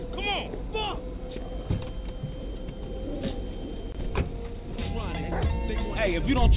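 No technical faults can be heard in the audio.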